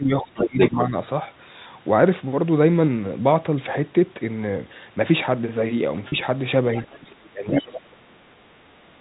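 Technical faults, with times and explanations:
0.00–0.95 s, speech suppressed in double talk: the talker's level sags by as much as about 20 dB over roughly 0.7 s in total. While the far end is also active, the echo canceller likely cannot separate the near voice from the loudspeaker echo and attenuates both.
0.35–0.81 s, other side's voice leaking through: a second voice comes through at about the same level as the talker. It is likely residual loudspeaker echo that the canceller failed to remove, and it overlaps the suppressed stretch.
6.09–6.12 s, packet loss with pitch repetition: one 30 ms packet goes missing. The receiver bridges the gap by repeating the last pitch period, so there is a brief, slightly held, buzzy tone before normal speech resumes. The gap is too short to fade into silence.
6.80–7.29 s, other side's voice leaking through: a faint second voice sits about 25 dB below the talker. 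It likely comes from loudspeaker pickup that the echo canceller left behind. It is band-limited to the telephone range like the rest of the audio.
7.30–8.43 s, speech suppressed in double talk: the talker dips by as much as about 30 dB over roughly 1 s in total. As in the opening, the canceller likely treats the overlapping talk as echo and turns everything down.
7.52–7.64 s, other side's voice leaking through: a short burst of the far voice arrives at about 5 dB below the talker, inside the suppressed stretch.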